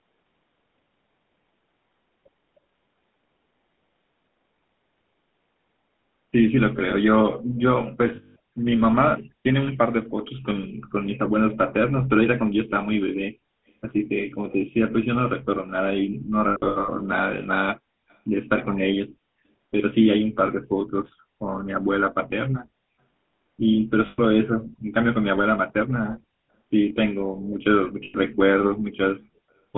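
Speech heard through the GSM full-rate codec from start to finish, with a buzzy, gravelly roughness and a band of roughly 150 Hz to 3.6 kHz, consistent with 13 kbit/s full-rate coding. Lost GSM frames cause brief rough, metallic holds: 200 ms at 8.16 s, 300 ms scattered across 16.48 to 16.89 s, 120 ms at 24.06 s, and 100 ms at 28.04 s. From 18.09 to 18.17 s there is a very faint copy of the speech about 0.31 s late, likely an echo leak from a loudspeaker whose echo canceller let some pickup through.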